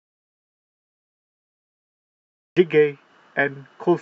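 From the very start until about 2.57 s there's nothing at all, dead silence with not even room tone underneath, and the speech only arrives after that. That's an audio dropout to silence already under way when the clip begins. Most likely the input was cut off, through a loose connection, a failed link or a mute left on, while the recorder kept writing silence. Whatever was said in that first stretch just isn't there.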